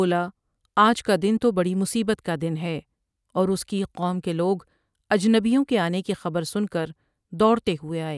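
Nothing in the speech stood out as a technical problem on listening.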